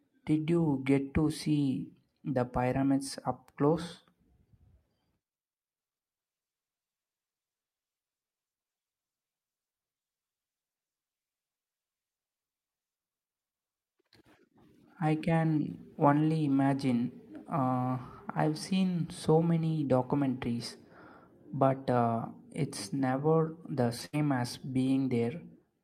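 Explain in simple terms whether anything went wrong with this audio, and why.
Lost packets rebuilt from error correction occur at ten brief spots between 23.09 and 25.57 seconds. Each 20 ms piece went missing, and a rougher backup copy from the next packet filled in, so the speech turns briefly grainy.

A burst of packet loss hits at 24.05 seconds. Several packets in a row were lost or came too late, so the last sound was stretched and faded for about 75 ms, and about 80 ms of speech was skipped.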